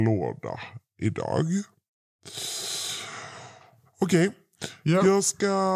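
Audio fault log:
throughout wrong sample rate: speech runs at 0.726 speed and 5.55 semitones low, pitch and tempo dropping together rather than separately as in pitch-shifting; fits 44.1 kHz audio played at 32 kHz.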